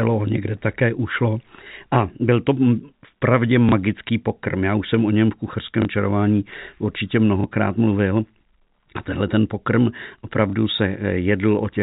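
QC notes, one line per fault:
3.69–3.72 s, 5.82–5.85 s, 7.41–7.44 s, 10.50–10.53 s: packet loss with last packet repeated. Each time a packet went missing, and the receiver replayed the previous 30 ms, which fits a 30 ms packet. The copy ignores the pitch period, and each single repeat sounds like a small blip.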